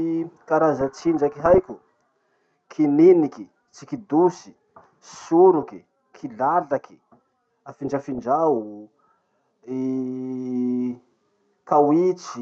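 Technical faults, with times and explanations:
0.81–1.70 s, 5.63–5.73 s and 7.84–8.26 s: DAB burbling. Bit errors slip past error correction, making single MP2 sub-bands jump in level. The result is short noise blips over the speech rather than silent gaps.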